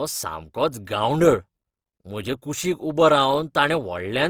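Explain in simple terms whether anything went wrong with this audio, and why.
Something did go wrong: across the whole clip the speech has a grainy, rough, hissy texture, as if a fine noise were woven into it. This is most likely Opus compression, where a low data budget forces the encoder to fill in missing detail with noise or copied lower sounds. It differs from MP3 damage because there is less watery swirling, and the full range of highs is still present rather than muffled.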